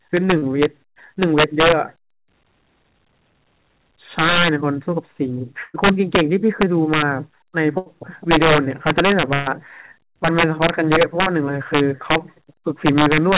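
Integer overflow runs through the whole clip. The speech is driven about 9 dB past the top of the integer range, so around one percent of samples, the loudest peaks, exceed the limit. Instead of being held at full scale, each of those samples wraps around to the opposite extreme. On those peaks this produces harsh, violent cracks, far sharper and more broken than ordinary clipping. The sound is also band-limited with nothing above 4 kHz, which points to a narrowband call codec such as G.711 A-law.

Short concealed packet loss occurs from 0.38 to 0.44 s. About 40 ms of audio never arrived in time, and the receiver covered roughly 36 ms of it by extending the preceding sound, using its pitch if voiced or shaped noise if not, before blending back into the real signal. It is heard as a brief smear or wobble, and a short consonant in that span can disappear.

Bursts of packet loss follow at 5.64 to 5.76 s, 7.78 to 7.88 s and 9.34 to 9.48 s, losing about 100, 80 and 120 ms of audio respectively. 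In each burst the receiver kept the last sound going and faded it as the gap lengthened, so a voiced sound turns into a held buzz and anything else into a dying hiss. In the first burst the fade reaches about 20 ms of silence before the audio resumes. Each time, playback picks up further along with that stretch simply gone.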